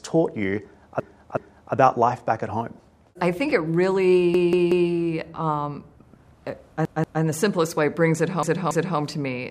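Repeated frames cause a stutter at 1.0 to 1.74 s, where a 371.5 ms block plays twice more, and at 4.34 to 4.90 s, where a 185.8 ms block returns three extra times. The same fault recurs at 6.85 to 7.22 s (185.8 ms, twice more) and at 8.43 to 8.99 s (278.6 ms, twice more). The block lengths fit whole compressed frames of about 93 ms. Unlike a dropout, nothing goes missing: identical fragments play back to back, and the audio runs longer by the repeated time.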